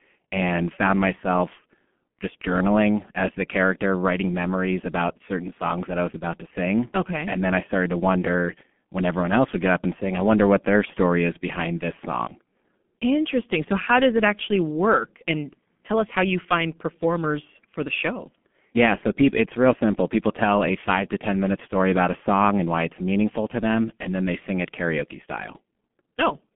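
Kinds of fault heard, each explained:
G.723.1 codec: The speech has passed through a low-rate internet-telephony codec that codes the signal in 30 ms frames at about 6.3 kbit/s, rebuilding the voice from a coarse model that is refreshed only slowly. The line band runs from roughly 150 Hz to 3.4 kHz, and nothing remains above 3.6 kHz, so the speech sounds muffled throughout. The heavy coding damage adds a hoarse, rough quality, and consonants come across smeared and indistinct.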